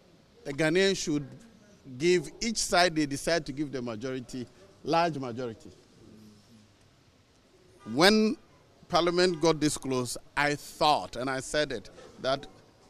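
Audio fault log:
Nothing to log here, as no faults turn up anywhere in the audio.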